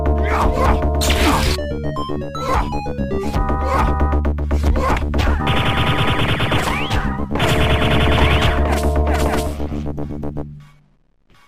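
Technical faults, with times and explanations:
Nothing stood out on listening to this recording.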